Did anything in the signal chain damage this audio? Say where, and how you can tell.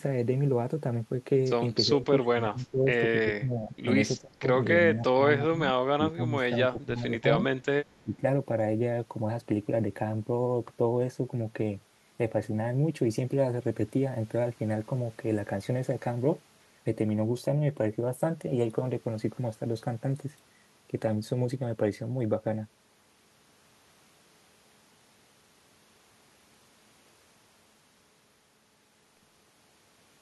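Yes. The damage is in call processing. Speech suppressed in double talk appears as level dips of roughly 15 to 25 dB at 1.86–3.74, 4.18–4.46, 4.86–5.61, 5.97–7.42 and 8.03–8.23 s. The likely cause is an echo canceller that could not separate this talker from loudspeaker echo during overlap, so it attenuated both.

An echo leak occurs at 7.64–8.03 s. It is a very faint delayed copy of the speech, about 303 ms behind the original and roughly 40 dB down. This is likely residual loudspeaker pickup that the far-end canceller failed to remove and then sent back through the call.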